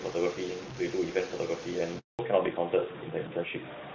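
Speech throughout carries a gritty, grainy distortion sitting only about 15 dB below the signal. It changes with the voice rather than hissing steadily, so it is likely low bit depth without dither, with truncation to about 6 bits. From 1.99 to 2.19 s a handover gap leaves 200 ms of silence: the voice dies away and then resumes, unlike a dropout that clicks or smears. From 2.19 s to the end, fallback to narrowband removes everything above 4 kHz, leaving the voice duller and rougher. That loss is a lasting step change, not a brief codec glitch, and before it the HD Voice (AMR-WB) sound reaches noticeably higher.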